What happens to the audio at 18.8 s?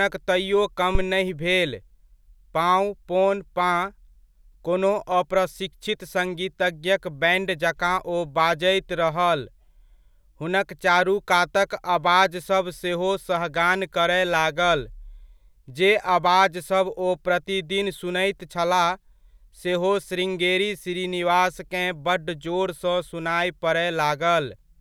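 Nothing goes wrong at 18.8 s; the speech there plays through intact, with no dropout, click, distortion or other fault.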